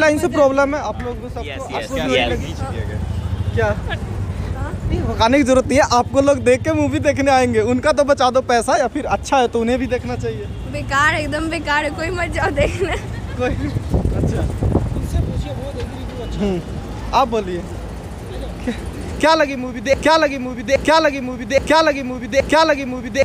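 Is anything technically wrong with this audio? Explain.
Yes. From 19.94 s to the end there's a broken-record loop: a 0.82 s fragment repeats exactly, back to back, four times. Whatever should have played there is gone, likely because the player or stream stalled and kept resending its last buffered piece.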